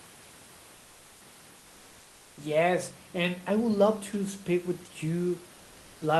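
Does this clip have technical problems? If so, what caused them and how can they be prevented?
Yes. From 0.75 to 1.21 s, a gap of about 460 ms, the room's natural background turns into a smooth, featureless hiss, about 1 dB quieter and sitting about 30 dB below the loudest speech. This is comfort noise in place of the background, likely caused by discontinuous transmission: the sender stopped sending audio when it detected no speech, and the receiving end filled the gap with synthetic noise roughly matched to the room. Turning off DTX in the Opus encoder settings prevents it.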